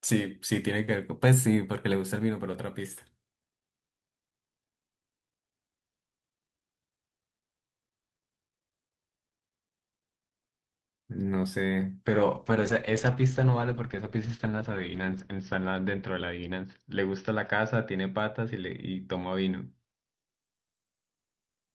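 At 12.07 s a call bitrate drop begins and lasts to the end of the clip. Up to then, the Opus call path carries the speech with its usual coding noise. After the drop, the encoder codes far more coarsely. The speech turns rough and watery. The top end also goes. Content above about 6 kHz disappears, so the voice sounds muffled. The change fits a fall from 32 kbps to about 8 kbps. The worst stretch lasts about 3 s.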